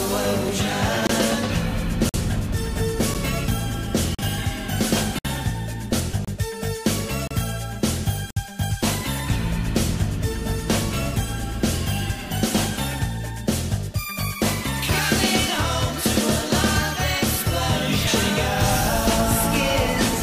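Eight gap between stream segments faults cut hard-edged silent holes into the audio at 1.07, 2.09, 3.14, 4.15, 5.19, 6.25, 7.27 and 8.31 s. They recur once per second and last from 9.4 ms to 61.7 ms. The time stamps of consecutive one-second segments leave room that the player fills with silence, so nothing is lost. At 12.10 and 18.07 s, six seconds apart, the audio instead jumps straight ahead with no silence, skipping roughly 30 ms each time. This is likely audio missing between chunks as one 6-second chunk closes and the next opens, so it removes sound rather than inserting a pause.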